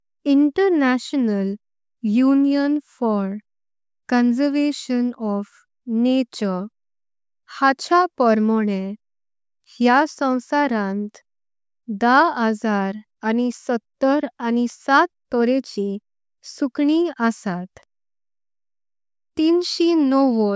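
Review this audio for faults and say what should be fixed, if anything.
Nothing to fix: no faults found in this speech recording.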